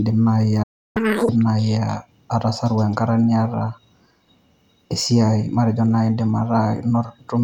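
At 0.63 s the speech cuts out in mid-flow and stays silent until 0.97 s, a gap of about 0.32 s. This playback stall is likely the player running short of data or having its thread blocked. On a waveform it shows as a flat line; on a spectrogram, a blank vertical band.

From 0.97 s to 1.29 s the player works off its backlog in a catch-up at higher speed, resampling to play at twice normal rate. The speech sounds hurried and chipmunk-like, raised by roughly ten semitones. The spectrogram shows harmonics and formants shifted upward and compressed in time before snapping back to normal spacing.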